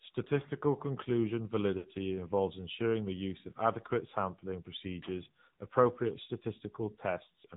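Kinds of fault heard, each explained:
AMR narrowband mobile codec: the speech runs through mobile-phone coding at a low rate that fits 7.4 kbps, so nothing passes above 4 kHz and the voice sounds plainly buzzy and synthetic. A spectrogram shows energy cut off flat at 4 kHz, with smeared, blocky harmonics below.
Lost AMR speech frames: from 1.78 to 1.87 s, just before "involves ensuring the use", speech frames failed and the decoder stretched the last good sound while fading it, which fits about 60 ms lost. The waveform shows a brief smeared, decaying stretch, and the spectrogram shows frozen formants fading out.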